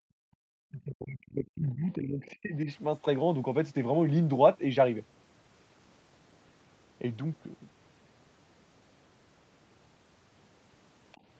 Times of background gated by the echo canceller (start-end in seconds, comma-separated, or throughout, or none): 0.00-0.42